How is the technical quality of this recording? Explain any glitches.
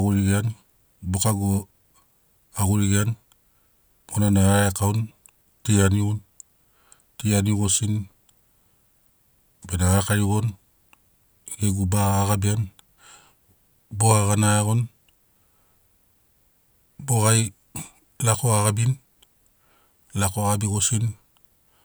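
There are no technical glitches to explain in this speech recording. Nothing in the audio breaks, drops out or jumps at any point.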